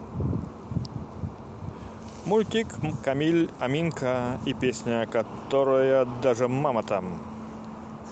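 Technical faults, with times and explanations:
No technical faults here, so there are no times or explanations to give.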